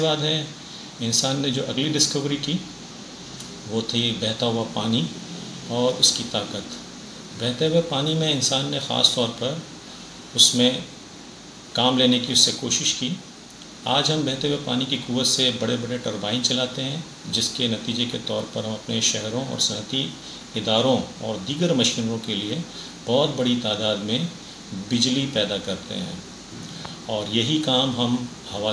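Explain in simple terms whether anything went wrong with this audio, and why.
Nothing went wrong with this audio that a listener can pick out. At no moment does the sound misbehave or show signs of a technical problem.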